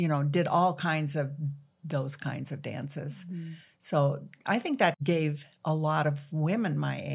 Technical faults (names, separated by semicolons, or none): none